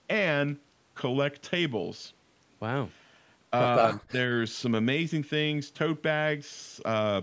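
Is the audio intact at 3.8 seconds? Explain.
No. From 3.77 to 4.17 s the speech is hit by what is likely speech suppressed in double talk: the echo canceller, faced with both ends talking at once, mistook this talker for loudspeaker echo and pulled the level down, at worst by around 40 dB, for roughly a third of a second in pieces. Unlike a network dropout, which cuts cleanly with no level ramp, this sounds like the voice being ducked and thinned, sagging and breaking up while the far side speaks.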